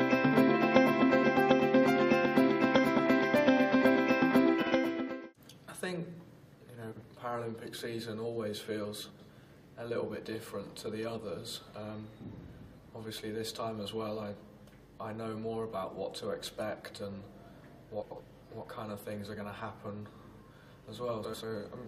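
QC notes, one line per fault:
4.62–4.72 s and 6.92–7.02 s, frames out of order: two adjacent blocks of roughly 46 ms each got swapped, so a tenth of a second plays back-half-first. You hear a quick garbled flutter. The block length fits a pair of frames of around 23 ms. Nothing goes missing, it's just reshuffled.
9.10–9.30 s, 18.01–18.21 s and 21.24–21.44 s, frames out of order: same swap, but bigger. Each half is about 93 ms, which points to four frames per block, so the scrambled stretch lasts about 0.2 s. That makes the flutter longer. Overall timing stays intact, since only the order of the audio changed.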